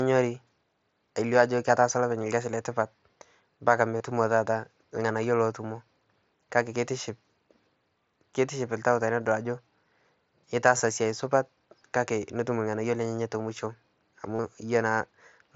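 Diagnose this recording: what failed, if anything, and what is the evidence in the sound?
Concealed Bluetooth headset packet loss on the wireless link: brief buzzy patches at 3.98, 9.23, 10.77 and 14.35 s, where the receiver looped recent waveform over missing packets.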